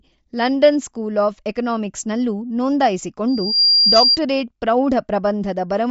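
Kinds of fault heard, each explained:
Bluetooth LC3 compression: The speech has a breathy, grainy edge throughout and nothing above about 7.7 kHz, likely from LC3 coding at 32 kbps in 10 ms frames. Unlike a plain low-pass filter, the thinned upper band is partly refilled with noise rather than simply muffled.
Loudspeaker feedback squeal: From 3.27 to 4.18 s a single 4.8 kHz tone swells over roughly a third of a second to sit a few decibels above the speech, as the microphone-loudspeaker loop exceeds unity gain. Unlike an added test tone, it grows by itself instead of starting at full level.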